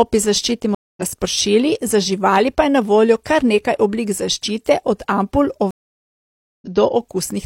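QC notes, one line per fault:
0.75–1.02 s, stream reconnect: the connection drops and you get about 0.22 s of silence while the player reconnects and spins up a fresh decoder. It picks up again at "razpršili za živali pa", roughly a fifth of a second further on, so a bit of audio just goes missing.
5.71–6.68 s, stream reconnect: same thing, bigger. Right after "oblik zaščite od ampul" it goes silent for about 0.91 s, then comes back around half a second later in the stream, so there's a skip.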